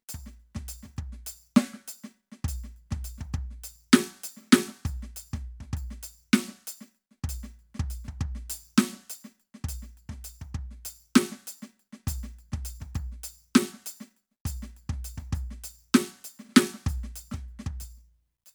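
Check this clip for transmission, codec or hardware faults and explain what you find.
Nothing wrong turns up in this music clip; there's no transmission, codec or hardware fault to report here.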